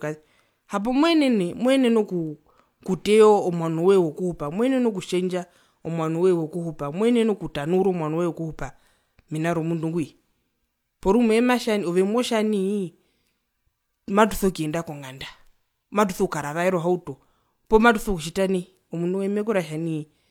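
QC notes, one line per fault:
No fault found in this speech clip.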